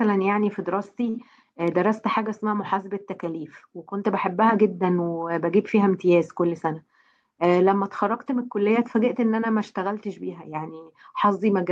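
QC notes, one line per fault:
1.09–1.16 s, short stall from a late packet: a packet arrived late, the jitter buffer ran dry, so the receiver held the last sound for about 45 ms, then resumed with nothing lost.
6.45–7.25 s, jitter buffer speed-up: excess buffered audio was trimmed by cutting short pitch-period pieces, removing roughly 50 ms, so the speech runs about 5% faster at unchanged pitch.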